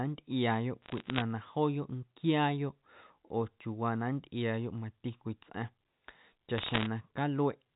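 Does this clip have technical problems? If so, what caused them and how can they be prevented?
Yes. Bit errors on a digital phone line cause crackle at 0.82–1.22 s and 6.58–6.86 s. Flipped bits, under one percent of them, each corrupt one G.711 sample, giving isolated spikes in the waveform and thin vertical streaks on the spectrogram. Error-checked transport or forward error correction would prevent this.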